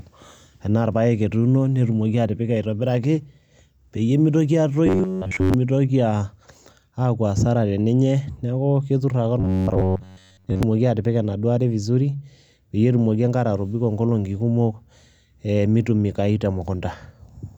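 Speech with robotic sound from repeated short buffers at 4.87–5.54 s, just after "peyie mitoki", and 9.40–10.63 s: a rigid metallic buzz at 93.8 Hz, showing on a spectrogram as evenly spaced harmonic lines and in the waveform as a short segment repeating about every 10.7 ms. The likely cause is starved audio input, with the last short buffer replayed over most of each span.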